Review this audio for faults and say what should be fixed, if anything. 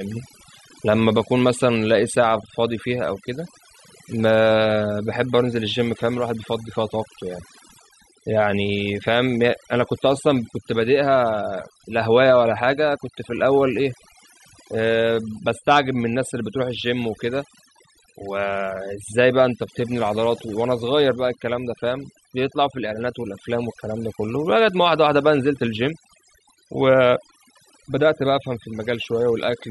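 Across the whole clip the pauses between phrases fall to near silence, broken by twinkling specks. That is overdone noise removal: the noise reduction was set so aggressively that any frequency band sitting close to its noise estimate was pushed far down or shut off entirely. Quiet parts of the speech fell inside that estimate and were stripped out along with the noise, leaving isolated bands flickering on and off. To prevent it, reduce the reduction amount and raise the threshold so only the true noise floor is attenuated, checking the result by ear on quiet passages.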